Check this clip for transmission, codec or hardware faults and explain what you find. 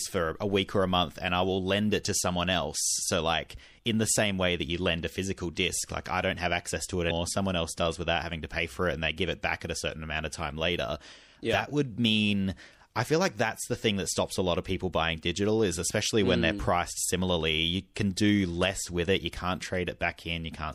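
Two faults are present: codec damage across the whole speech recording and one brief corruption event.

MP3 compression runs throughout. The audio has a plainly audible watery, swirling quality with dulled treble, which fits a 64 kbps encode. The likely cause is an encoder short of bits that cuts high frequencies and switches weak spectral lines on and off between frames.

Damaged data in a compressed stream occurs from 7.07 to 7.11 s, right after "have access to it". Corrupted bytes in the stream cause the decoder to misread those frames, lose sync and hunt for the next valid header, producing a short chirp or blip.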